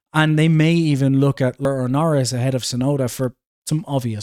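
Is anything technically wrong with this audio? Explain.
Yes. At 1.65 s, just after "may even look at", there is damaged data in the compressed stream: the decoder misreads corrupted frames and resynchronises, producing a brief chirp, squawk, click or short hole in the speech.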